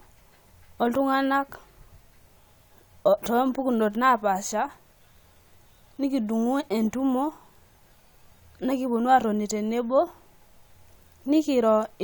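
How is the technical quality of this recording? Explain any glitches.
The speech signal runs continuously and evenly, with nothing a careful listener would flag as a technical problem.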